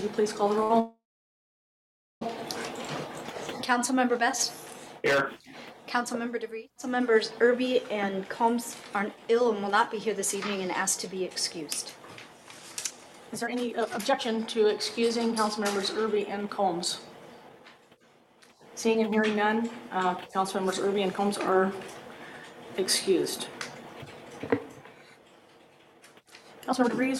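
At 0.63 s a packet arrived late and the jitter buffer briefly ran dry, so the receiver held the last sound for about 65 ms until it came. This short stall from a late packet sounds like a slightly stretched, faintly buzzy hold, with nothing skipped.

From 0.80 s to 2.23 s packets were likely held up in transit, emptying the buffer again and causing a call audio freeze. The last sound is drawn out into a fading buzz, and then about 1.2 s of silence follows. Playback resumes where it stopped, adding roughly 1.4 s of delay.

Later the buffer held more audio than its target, so the receiver cut short pitch-period pieces to catch up. This jitter buffer speed-up runs at 103% from 8.96 s to 11.62 s, removing around a tenth of a second. It runs at 120% from 13.32 s to 16.68 s, removing around 0.7 s. It runs at 107% from 17.49 s to 21.58 s, removing around 0.3 s. It runs at 125% from 25.93 s to 27.13 s, removing around 0.3 s. 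The sound runs faster at unchanged pitch, sounding hurried in the 107%, 120% and 125% stretches.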